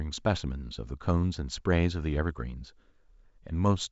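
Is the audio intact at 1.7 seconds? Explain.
Yes, the audio is intact at 1.7 seconds, with the speech passing cleanly through G.722 wideband telephone coding at 64 kbit/s and nothing present above about 7.7 kHz.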